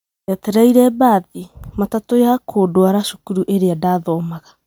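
Right through the speech there's a swirly, hollow quality with smeared consonant attacks, more than a single pass at around 128 kbit/s MP3 would give. That's likely generation loss: about seven re-encodes piling up noise and spectral holes, with nothing above 20.1 kHz.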